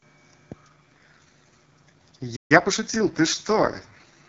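Speech over AMR wideband (HD Voice), clear for the first 0.66 s and then hit by an AMR rate drop that lasts to the end. Nothing goes missing and the band stays wide, but the speech turns rough, buzzy and synthetic. That's what you'd expect when a weak radio link pushes the codec down from its clean top rate toward the bottom of its range, spending bits on error protection instead of detail. The rasp fits a rate around 6.6 kbit/s. At 2.36 s there's a playback stall: the sound just cuts out mid-flow for about 0.14 s, likely because the player ran dry or its thread got blocked, and then picks back up at 2.52 s. From 2.52 to 3.08 s you get time-compressed catch-up, with the speech hurried along at about 1.25x but at normal pitch, as small chunks are cut and cross-faded to work off the backlog from the stall.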